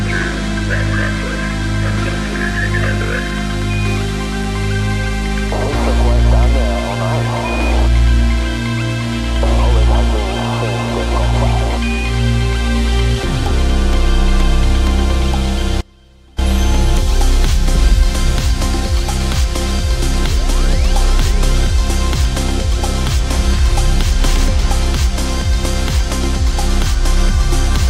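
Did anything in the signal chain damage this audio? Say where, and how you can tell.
Yes. Audio dropout to a faint residue, 15.81–16.38 s: an abrupt 0.57 s cut leaves faint sound roughly 30 dB down, likely an upstream connection break with later stages still live.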